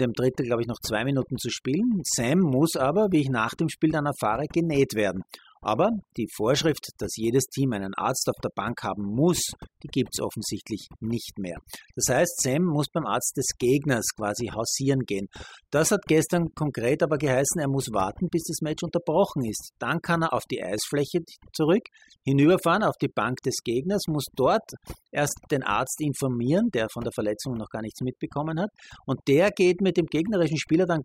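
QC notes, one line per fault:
Throughout: overdone noise removal, with bands near the noise estimate gated hard, leaving a lowered background with twinkling specks and speech losing its quiet components.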